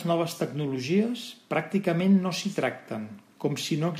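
A short speech recording with no technical fault to report. There is nothing here that calls for a time or a cause.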